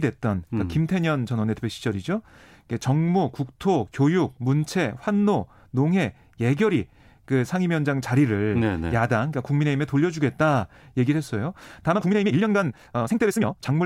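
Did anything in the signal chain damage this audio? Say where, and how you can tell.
Yes: from 11.9 s to the end, the speech rushes along at 1.81 times speed with unchanged pitch. That's likely a time-stretched section, with storage-stage editing software dropping short slices.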